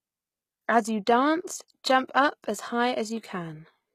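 From start to finish the speech carries plainly audible coding damage, most likely HE-AAC compression at a low bitrate, consistent with about 20 kbps. The lower band is coded directly, while the treble is rebuilt by copying lower bands upward, so s sounds come out gritty, metallic and lispy. On a spectrogram the upper region shows repeated, smeared blocks above a crossover line, with harmonics that fail to continue cleanly across it.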